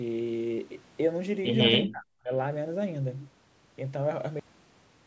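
From 1.86 to 2.31 s the speech dips sharply, by around 40 dB, most likely speech suppressed in double talk, with the echo canceller ducking the talker while the far end spoke.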